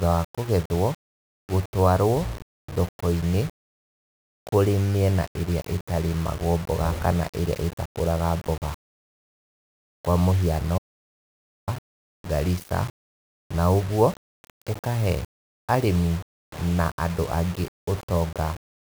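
Speech runs through the whole clip with grainy, signal-following distortion from low bit depth without dither, likely a 5-bit rounding with no dither, leaving error only about 20 dB below the voice. Unlike steady hiss, the grit rises and falls with the speech, and quiet tails sputter or vanish. At 10.78 s, right after "kwa mũhiano", an audio dropout to silence removes about 0.89 s until 11.68 s, likely from lost input. Unlike a natural pause, this gap holds silence, with even the room tone gone.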